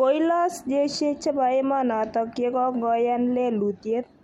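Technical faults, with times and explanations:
Nothing stood out on listening to this speech recording.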